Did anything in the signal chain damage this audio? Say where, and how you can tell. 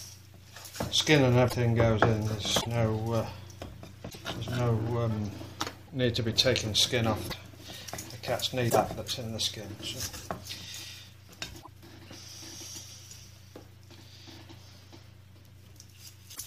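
Yes. At 1.48, 2.60, 4.09, 5.87, 7.28, 8.69, 11.61 and 16.34 s the audio lurches forward, followed by a short disturbance (a chirp, noise burst or hole) of about 30 to 70 ms, roughly one to three 26.1 ms frames. That pattern points to the codec or storage stage, most likely a broken MP3 bit reservoir. Frames were lost, so the next frames fetched their borrowed bits from bytes belonging to another frame and decoded garbage until the stream resynchronised.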